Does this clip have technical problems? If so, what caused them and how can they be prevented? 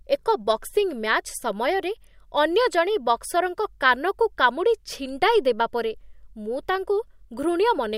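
No, there are no technical problems in this recording.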